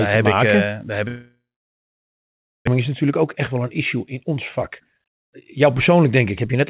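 A speech recording carried over a G.711 mu-law call path, which keeps nothing above 4 kHz, has two faults. Just after "daar heb", from 1.08 to 2.69 s, there is a long network dropout, likely: the last sound smears into a fading buzz, then about 1.3 s of silence, and speech resumes with about a second missing. Unlike a brief packet-loss concealment glitch, nothing is stitched over; the gap stays open. From 2.77 s to the end, a jitter buffer speed-up plays the speech about 14 percent fast as the receiver trims roughly half a second of built-up delay by cutting out pitch-period-sized slices. The pitch stays unchanged, which separates it from a sample-rate or playback-speed error that would raise the pitch.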